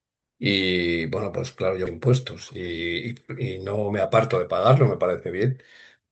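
At 1.85 to 1.87 s the speech jumps ahead: roughly 0.7 s of audio was dropped and the two sides are spliced together with no gap. From 4.81 to 5.54 s, a jitter buffer speed-up trims short pitch-period pieces, about 50 ms in total, so the speech runs about 6% faster at unchanged pitch.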